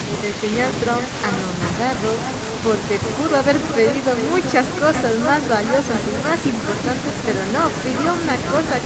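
From start to finish the speech is shadowed by an echo with no canceller: the far end's loudspeaker feeds the call back into its microphone, and nothing subtracts it, so every phrase returns roughly 0.4 s later, about 8 dB quieter and thinner. On a waveform each syllable burst has a smaller twin trailing it. On a spectrogram the harmonic patterns repeat as fainter, offset copies, all stopping near the 8 kHz ceiling of the call path.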